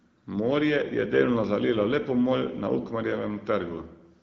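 No technical faults are audible.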